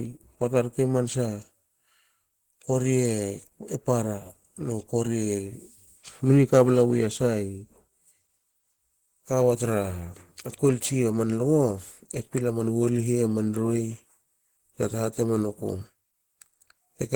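A speech clip with plainly audible Opus compression damage throughout, likely from encoding at a low rate, around 16 kbps. The voice sounds hoarse and muffled, the texture of the speech-oriented hybrid mode, yet the band stays full, reaching about 20.1 kHz. Unlike MP3 damage, there is less swirling or watery warble from spectral holes, because the gaps are filled with folded or noise-like energy, so the speech turns grainy and rough.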